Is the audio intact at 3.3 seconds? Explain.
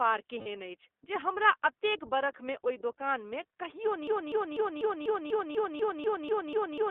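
No, at 3.3 s the speech carries iLBC codec damage, present throughout. Each short frame's excitation is coded independently, consistent with 20 ms frames at about 15.2 kbps, leaving a plainly rough, synthetic texture confined to roughly 300 Hz to 3.5 kHz.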